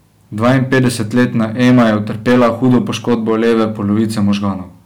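Right from the start and running the whole way through, the speech is hitting hard clipping. Something in the chain got driven about 10 dB past what it could pass, so the peaks get sliced off flat. Only a few percent of the samples end up over the limit, but they land on every loud syllable, and those squared-off tops throw harmonics way up the spectrum. You hear it as a gritty, harsh fuzz riding on every stressed moment.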